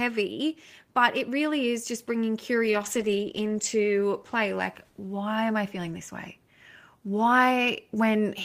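From 2.66 s to 5.01 s the speech goes through a call bitrate drop. The encoder was pushed to spend far fewer bits, which fits a fall from about 32 kbps to 13 kbps. For about a second at the bottom, the voice turns coarse and watery and the high frequencies are cut away. It then recovers. Unlike packet loss, nothing drops out or repeats. The sound stays continuous and only its quality degrades.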